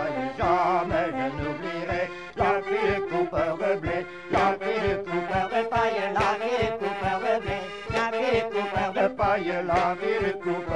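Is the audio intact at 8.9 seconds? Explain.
No. From 5.28 to 9.01 s there is a section at the wrong speed, likely from playback or editing locked to the wrong clock, running it 1.15 times too fast. At 8.9 s the sound is hurried and raised by about two semitones, with speed and pitch shifted together.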